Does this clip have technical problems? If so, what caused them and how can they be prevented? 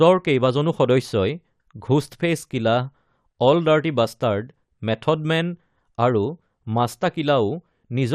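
Yes. Throughout the speech, the encoder was likely starved of bits by MP2 compression: MPEG Layer II divides the signal into 32 sub-bands and shares out a fixed bit budget, and here there are too few bits, which fits a rate around 80 kbps. Upper bands are switched off and flicker in and out, while the remaining bands are coarsely quantised, so the sound is plainly dull, with a gurgling, granular roughness. To prevent it, encode at a higher bitrate or use a more efficient codec.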